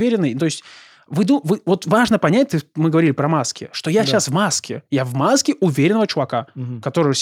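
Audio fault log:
No fault is heard in this speech clip.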